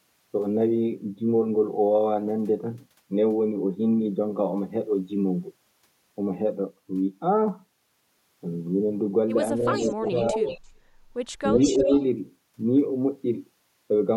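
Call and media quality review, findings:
Speech suppressed in double talk, 9.63–10.38 s and 11.5–11.9 s: speech dips, deeply (about 30 dB) in the first, slightly (about 5 dB) in the second. Likely the far-end echo canceller attenuating its own talker along with the loudspeaker echo during overlap.

Echo leak, 9.66–10.68 s and 11.56–12.04 s: delayed copy of the speech about 345 ms behind, about 5 dB below the original in the first, about as loud in the second. Likely loudspeaker pickup that the remote echo canceller did not fully remove.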